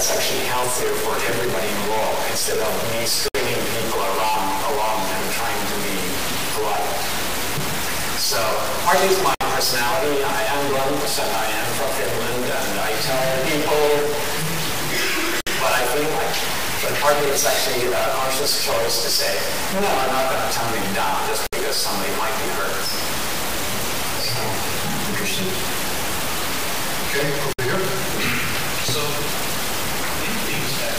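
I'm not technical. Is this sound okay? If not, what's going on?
No. A noisy distortion runs through the whole clip, and quiet moments fill with hiss. A stuck bit, one data bit frozen, is the likely cause.

There is also a gap at a join of encoded pieces every six seconds: at 3.28, 9.35, 15.41, 21.47 and 27.53 s. The sound drops out for about 60 milliseconds, then resumes.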